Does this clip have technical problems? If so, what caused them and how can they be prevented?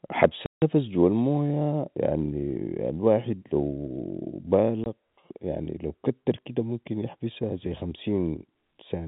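Yes. Packet loss filled with silence cuts the speech at 0.46 to 0.62 s and at 4.84 to 4.86 s. These are hard-edged gaps of 160 ms and 20 ms, which fits eight lost 20 ms packets and then one, replaced by silence. Packet loss concealment at the receiver, which fills gaps with extrapolated audio, and a more reliable network path or forward error correction would prevent this.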